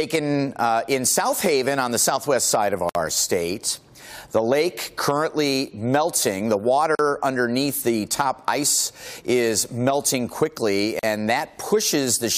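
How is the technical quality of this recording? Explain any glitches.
The recording is marred by three brief silences that break otherwise continuous sound, each a gap at a join of encoded pieces. They fall at 2.89 to 2.95 s (about 59 ms), 6.95 to 6.99 s (40 ms) and 10.99 to 11.03 s (40 ms), a steady 4-second spacing. The audio appears to have been encoded in 4-second pieces and joined untrimmed, so each piece's leading encoder delay and padded final frame remain as dead air. Unlike a network dropout, nothing is lost: the sound resumes exactly where it stopped, the edges are softened rather than clicking, and the gaps recur at a regular interval.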